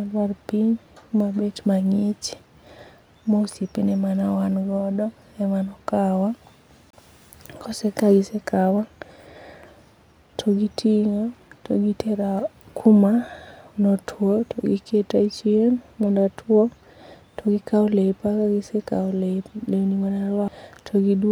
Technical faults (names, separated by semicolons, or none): CD skip